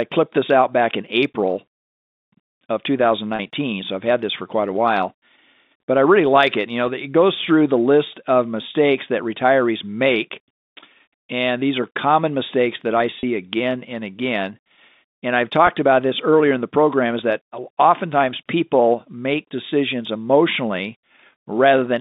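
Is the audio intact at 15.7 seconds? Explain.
No. At 15.67 s, just before "about this earlier in", there is a packet loss with pitch repetition. A lost stretch of about 10 ms, fitting a single dropped packet, was filled by repeating the last pitch period, giving a brief buzzy hold. The waveform shows identical repeated cycles, and the spectrogram shows a short run of steady harmonics.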